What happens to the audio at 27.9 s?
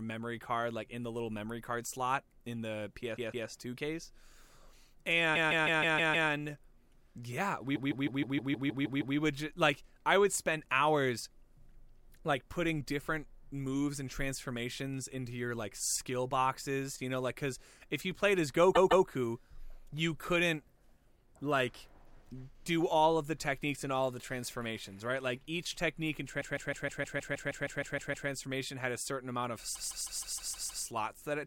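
At 27.9 s the speech is inside a stretch of repeated frames running from 26.40 to 28.28 s. A block of about 157 ms, which fits a run of six compressed frames, plays twelve extra times, producing a mechanical stutter that adds about 1.9 s.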